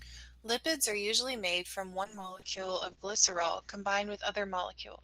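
Speech, with a call bitrate drop from 2.06 s, just after "usually made from", to the end. The sound turns coarse and muffled, which fits the encoder falling from roughly 32 to 7 kbps. On a spectrogram, energy above 8 kHz disappears.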